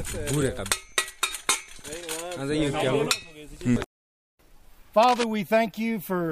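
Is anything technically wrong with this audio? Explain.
Yes. There is one fault. From 5.03 to 5.24 s, a burst of cable scratch noise sits over the sound for about a fifth of a second. It is a dense, uneven scratching and rustling, only a little quieter than the sound itself. The likely cause is a worn cable, connector or control being moved. As the contact shifts, its resistance jumps about rapidly, and those jumps add ragged noise to the signal until the movement stops.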